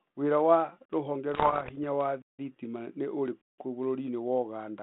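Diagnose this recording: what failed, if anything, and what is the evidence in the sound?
The output buffer underran three times, and each time the converter held its last sample value. The waveform goes flat and the speech stops dead, with little click: at 0.85 to 0.90 s (43 ms), at 2.22 to 2.39 s between "hinya wa" and "thitima nĩ" (171 ms), and at 3.41 to 3.58 s after "hinya wa thitima nĩ" (171 ms). The gaps fit buffers of 2048 and 8192 samples. Playback resumes where it paused, so nothing is skipped and the restarts are soft.

The codec link suffered bit errors on an ADPCM link, at a rate of roughly 1.5 percent, from 1.34 to 1.73 s, after "wira wa rũhonge" and before "hinya wa thitima nĩ". Each flipped bit throws off the decoder's step size and prediction, so the damage rings on for milliseconds rather than staying a single sample. It is heard as pops and rough, gritty bursts with brief jumps in level, carried over the 32 kbit/s G.726 telephone band of 150 Hz to 3.6 kHz.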